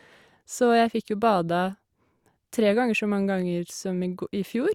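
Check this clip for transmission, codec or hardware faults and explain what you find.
Nothing faulty can be heard anywhere in this speech.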